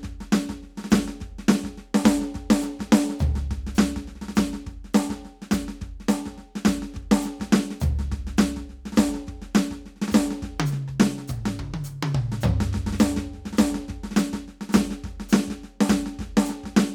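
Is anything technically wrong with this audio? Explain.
No, nothing technically wrong can be heard in this music recording. There are no audible faults at any point to point out or explain.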